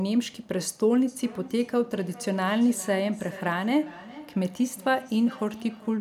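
Feedback echo between two devices runs from 1.07 s to the end of the clip. A second device in the same room is playing back this microphone's signal, and the microphone picks that playback up again. Each device's echo canceller only removes its own output, so the returning sound passes through. Each phrase comes back at a steady interval of roughly 0.4 s, thinner and more ringing, peaking at about 20 dB below the speech.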